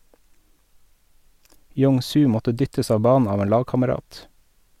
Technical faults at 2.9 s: none

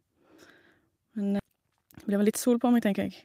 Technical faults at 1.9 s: jitter buffer speed-up

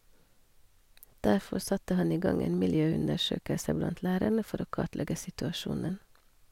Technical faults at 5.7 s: none

